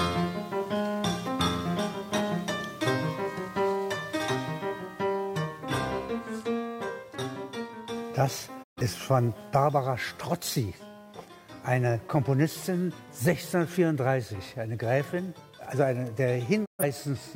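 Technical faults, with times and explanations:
8.62 to 8.81 s and 16.64 to 16.84 s, digital broadcast dropout: each time the sound ducks away over about 20 ms into a short silent hole, then returns partway along, with nothing bridging the gap. The receiver stopped getting decodable data, either because the signal was lost or because frames failed their checksum, so it muted output until valid frames arrived. Roughly 128 ms of programme is gone at each point, which fits three lost frames.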